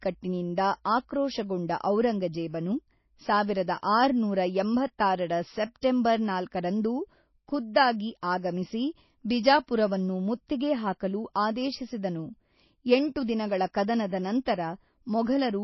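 Throughout the speech, a hard treble ceiling at 5.8 kHz and swirly, watery texture point to MP3 compression, likely at a very low bitrate around 24 kbps; spectrograms show empty space above the cut. At 5.81 s, after "ಸಾವಿರದ ಆರುನೂರ ಎಂಬತ್ತಾರರ", pre-echo puts a 17 ms hiss before the attack, visible as a smeared noise smudge ahead of the waveform's onset.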